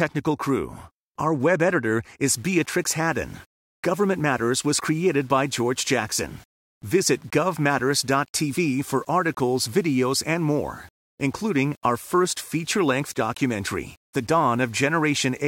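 From 2.35 s to the end, the speech was likely requantised to 8 bits by plain rounding, with no dither: low bit depth without dither. The rounding error tracks the signal, so quiet passages turn grainy and gritty, with distortion around 35 dB below the speech.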